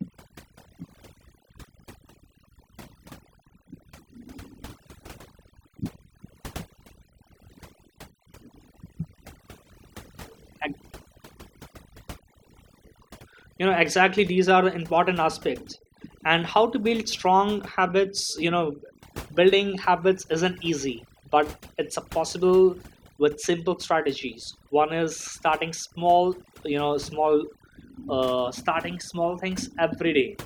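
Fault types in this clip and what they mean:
overdone noise removal: noise reduction set too strong throughout, gating bands near its noise estimate, so the background drops to twinkling near-silence and quiet parts of the voice go with it.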